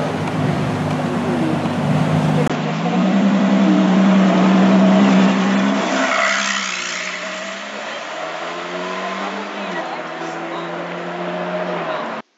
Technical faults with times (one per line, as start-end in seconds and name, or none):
2.48-12.38 input switched to a poorer device